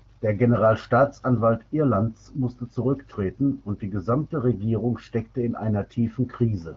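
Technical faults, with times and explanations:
None detected; the speech carries only the light coding expected of an AMR wideband (HD Voice) link, consistent with a 12.65 kbit/s rate.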